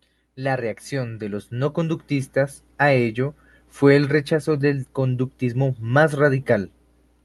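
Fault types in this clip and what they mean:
Automatic gain rising: the gain control judged the input too quiet and turned it up slowly. From 0.36 to 2.64 s, the speech and background noise swell together by about 9 dB. The level settles just before "a ello fue el".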